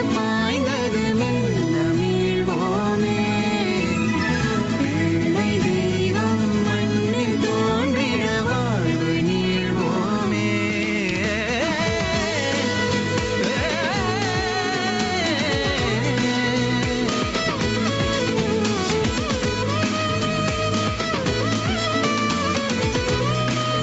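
Gain pumping runs through the whole clip. The gain ducks by a few decibels under each loud sound, squashing the dynamics. That's likely a far-too-hot microphone gain with a fast limiter clamping down, heard through a call path topping out at 8 kHz.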